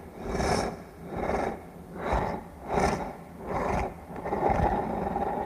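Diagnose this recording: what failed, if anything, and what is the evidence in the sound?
Nothing stood out on listening to this recording of everyday sounds, so there is no failure to trace to any stage of the chain.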